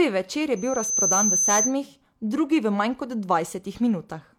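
Speech with a loudspeaker feedback squeal from 0.56 to 1.75 s, right after "večer je": the microphone is picking up its own loudspeaker, and the loop runs away at 6.2 kHz, swelling over a little under half a second to roughly 5 dB above the speech. On a spectrogram it shows as one bright horizontal line.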